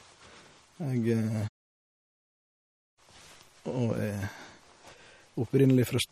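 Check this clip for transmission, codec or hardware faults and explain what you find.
One codec fault runs through the whole speech clip. Throughout, the sound is watery and swirly, with metallic chirps on s sounds, smeared attacks, and nothing above 15.6 kHz. This is likely MP3 compression: short on bits, the encoder cut the treble at that fixed frequency and let weak frequency lines flicker between frames, which fits a low bitrate around 48 kbps.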